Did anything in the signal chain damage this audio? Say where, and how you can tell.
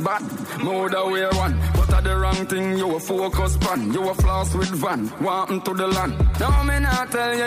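Yes. Repeated frames at the codec or storage stage: from 0.30 to 0.46 s a 78.4 ms block plays two extra times, a quick stutter that lengthens the audio by 157 ms. Identical repeated content and added duration rule out a dropout or gap.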